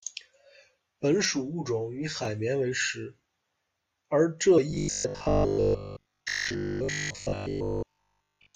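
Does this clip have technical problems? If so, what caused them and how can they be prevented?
Yes. From 1.25 to 2.25 s the speech turns hollow and phasey, the sign of channel delay (comb filtering): one channel runs about 10 ms late, and summing to mono cancels evenly spaced frequencies from around 50 Hz upward. Keeping channels sample-aligned before any mono fold-down prevents this.

At 4.57 to 4.59 s the speech leaps forward by about 70 ms, consistent with compressed frames skipped: a few frames were missing or rejected. Verifying file integrity and using error-resilient transport prevents it.

From 4.71 s to 8.55 s the speech becomes a rigid, metallic 50 Hz buzz that only loosely tracks the syllables, which is robotic sound from repeated short buffers. This likely comes from audio arriving too seldom, so a 20 ms chunk is replayed over and over for most of that stretch. Larger buffers and steadier scheduling prevent this.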